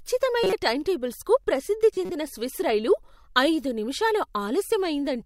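Corrupt frame decoded twice: damaged compressed frames were played anyway, misplacing energy in frequency. A loud glitch sounds at 0.44–0.53 s before "టైంటేబుల్స్కు ప్రసిద్ధి", and a quieter, longer glitch at 1.94–2.12 s before "స్విస్ రైలు ఐదు నిమిషాలు".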